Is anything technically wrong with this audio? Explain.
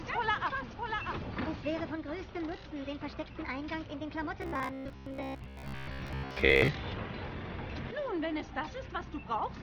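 Yes, there are two faults.

From the very start until 1.92 s there is a doubled audio track. A second, full-band copy of the same sound trails the original by roughly 0.7 s, about 5 dB quieter, with no reverb tail or room colour, and it cuts off abruptly at 1.92 s. The likely cause is the same signal being picked up a second time through a slower path, or an edit leaving two copies out of alignment.

From 4.42 to 6.68 s there is robotic sound from repeated short buffers. The audio becomes a stiff, metallic buzz pitched at 66.8 Hz that only loosely tracks the underlying sound. This likely happens because fresh audio arrives too rarely and the playback fills each gap by looping the most recent fragment, about 15 ms long to match that pitch. Most of the real audio in this stretch is skipped rather than played.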